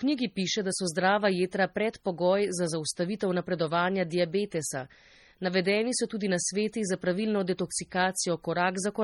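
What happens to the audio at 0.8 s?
At 0.8 s you're hearing the MP3 compression damage that runs through the whole speech clip. The swirly, watery texture, smeared attacks and metallic chirps on s sounds come from the encoder zeroing weak frequency lines frame to frame, likely at a very low bitrate around 32 kbps, with nothing left above 19.5 kHz.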